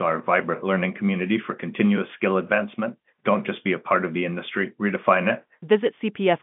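Nothing stood out on listening, with the speech carried in the narrow band of ordinary G.711 telephone coding, which leaves nothing above about 3.8 kHz.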